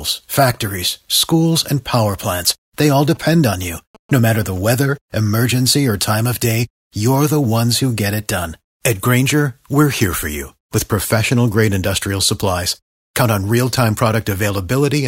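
From 3.15 to 4.58 s, after "power plants they all", a phone's rectified GSM signalling bursts give galloping 217 Hz buzzes in short groups, unlike steady hum.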